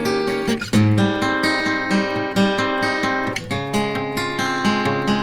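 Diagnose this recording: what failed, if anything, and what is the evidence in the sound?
At the codec stage, the music was likely re-encoded repeatedly, around seven passes through a chain that fits Opus at 64 kbit/s. Throughout, it sounds swirly, hollow and smeared, with blurred attacks, beyond single-pass artefacts, though bandwidth extends to 20.2 kHz. That is generation loss.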